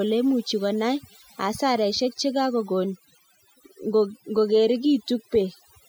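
Overdone noise removal runs through the whole speech clip. Denoising set far too hard pulls whole frequency bands down whenever they sit near the estimated noise, taking quieter speech detail with them. The result is a near-silent background sprinkled with twinkling specks. A spectrogram shows scattered isolated dots in the gaps and ragged, patchy speech harmonics.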